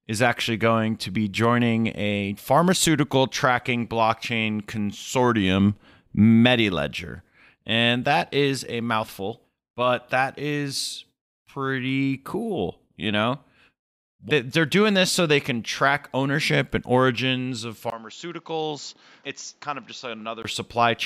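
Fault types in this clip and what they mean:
Input switched to a poorer device: after "ownership and origins of" at 17.9 s, a short gap, then quieter, duller sound cut off above 7.3 kHz until 20.4 s, likely a different mic.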